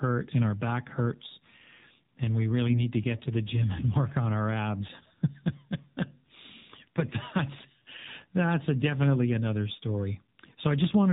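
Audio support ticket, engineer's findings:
AMR narrowband mobile codec, full clip. Speech band-limited, nothing above 4 kHz; buzzy, synthetic timbre with plainly audible coding damage. Probable component: AMR-NB encoder in the mobile leg. Character fits a low mode around 7.4 kbps. Few excitation pulses per 5 ms subframe, so the vocal-tract model is coarsely driven and the voice sounds thin and artificial.

AMR bit errors, 2.68–2.80 s. Short hoarse, scratchy, gargly burst; pitch and level roughly held. Probable component: weak radio link. Span fits about four corrupted 20 ms frames at a bit error rate of roughly 7%. Unprotected bits flipped while the checksum passed, so pulse positions, gains and spectral values were decoded wrongly.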